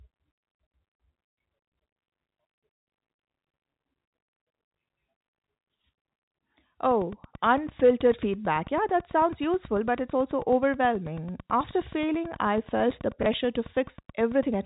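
A speech recording heard through narrowband telephone coding, with nothing above 4 kHz, carries two distinct faults. From 6.91 s to 14.55 s a train of clicks runs over the audio: about seventy near-identical pulses at a steady 9.2 per second, peaking at roughly the level of the speech itself. Because they keep ticking through the pauses and sit on top of the sound rather than replacing any of it, they come from something outside the signal. The likely cause is interference from nearby equipment or a faulty connection or power supply, not a gap in transmission. Within that stretch, from 13.23 s to 13.26 s, there is packet loss with the last packet repeated. About 30 ms of audio is missing, which fits a single lost packet, and the receiver fills it by replaying the previous chunk. This one is different from the clicks. It is a small blip made from the speech itself, and it happens once instead of pulsing regularly.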